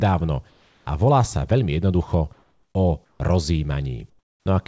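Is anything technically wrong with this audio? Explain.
Yes. Comfort noise in place of the background occurs at 0.50–0.86 s (before "a volá sa veľmi"), 2.33–2.75 s (after "volá sa veľmi jednoducho"), 3.05–3.20 s and 4.10–4.46 s. The room tone in each pause becomes a flat, featureless hiss, about 1 to 8 dB quieter, likely synthesized by the receiver while discontinuous transmission halted the sender. The band ends at 8 kHz, consistent with a G.722 call codec.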